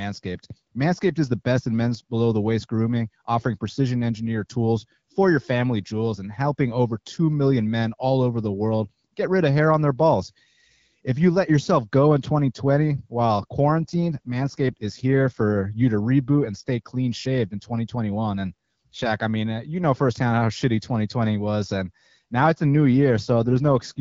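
AMR rate drops occur at 13.58–15.42 s, just before "you to reboot and", and at 23.17–23.99 s, after "now it's a new". The wideband speech turns rougher and more synthetic, with band and continuity intact, which fits the link forcing 12.65 down to 8.85 kbit/s.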